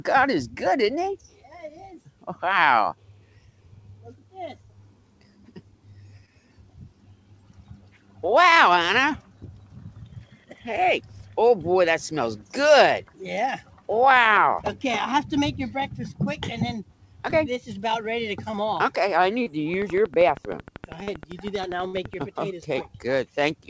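At 6.26–6.29 s, 8.75–8.79 s and 17.31–17.34 s there is short concealed packet loss: about 20 ms of audio failed to arrive, and the receiver extended the preceding sound to cover it. Each is an isolated brief smear or tick. A longer one, with 40 ms missing, comes at 21.03–21.09 s.

Between 18.52 and 19.52 s come scattered short gaps: roughly three small holes, the longest around 30 ms, each patched by continuing the last sound. Unlike the single losses, they cluster as hiccups within one second, with the sound staying clear between them.

From 19.74 to 22.23 s a train of clicks runs at a regular 12.5 per second, about 30 near-identical ticks peaking about 5 dB above the sound and audible in pauses too. Their steady, uniform spacing, likely from electrical interference or a faulty connection, sets them apart from concealment artefacts.

At 21.87–21.95 s a burst of packet loss removes about 60 ms. 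The receiver holds the last sound as a buzz or hiss that fades before the audio resumes with that portion missing. It is longer than the brief smears.

Throughout, the call path passes nothing above 8 kHz, consistent with a wideband codec such as G.722.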